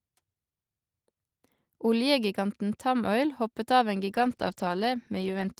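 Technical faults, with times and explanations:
4.1 to 5.6 s, call bitrate drop: right after "hoppet av en" the speech goes rough, watery and muffled, and it stays that way for the last 1.5 s without recovering. The encoder got squeezed when the call's bandwidth estimate fell, so it codes far more coarsely and trims the top end. The change in quality fits a drop from about 32 kbps down to around 13 kbps.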